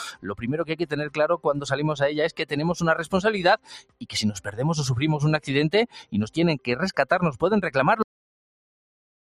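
Right from the start there's a noise suppressor applied to music or sounds, a speech-tuned one left running on material it wasn't built for. It treats anything steady or lingering as noise to be pulled down, so the gain keeps lurching by about 15 dB. Onsets punch through, then the body of each sound gets sucked away, which gives the whole thing a pumping, fluttery, slightly hollow feel.

You can pick out the worst moments where sound is cut by the noise suppressor: 0.12 to 0.44 s, 0.69 to 1.18 s, 2.32 to 2.53 s, 3.57 to 4.14 s and 5.87 to 6.14 s. In each stretch the suppressor decides the held part is noise and ducks it by about 13 to 14 dB at the deepest. The attack lands, then the level sags and the decay gets chopped short. The 3.57 s one runs longest, roughly half a second.

Then at 8.02 s there's a cut-off end. The audio just stops mid-sound and drops straight to digital silence for the remaining second or so. 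There's no fade or natural tail, so it reads as the final buffers never being written out, leaving an abrupt wall where the sound should have carried on.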